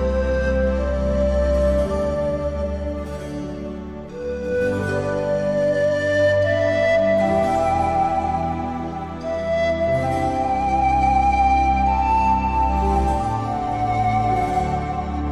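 No technical fault can be heard anywhere in the audio: the signal holds steady, with no dropouts, level jumps, distortion or timing disturbances at any point.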